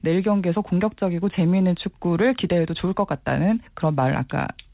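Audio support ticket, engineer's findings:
No faults found in this speech clip; the call path's band-limited sound with nothing above 4 kHz fits G.711 A-law at 64 kbps.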